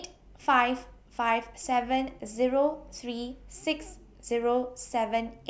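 No technical faults can be heard at any point in the speech.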